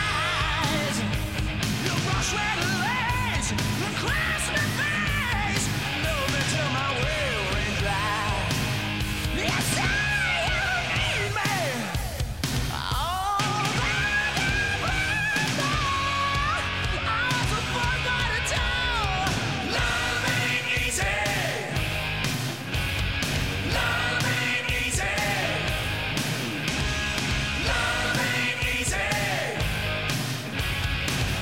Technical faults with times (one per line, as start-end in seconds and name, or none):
none